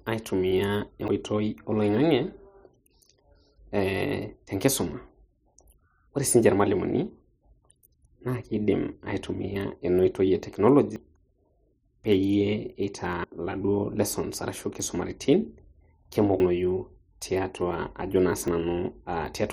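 Speech with five abrupt skips, at 1.08, 10.96, 13.24, 16.4 and 18.48 s. Each is a jump where somewhere between a few hundredths and a tenth of a second vanishes without any gap, likely a dropped buffer (overrun). The waveform shows a hard splice and the spectrogram a thin vertical line.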